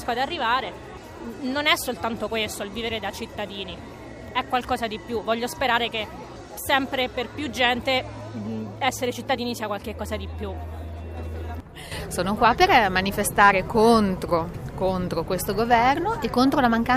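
No technical faults can be heard anywhere in this audio. At no point does the sound mark a moment where anything in the signal path went wrong.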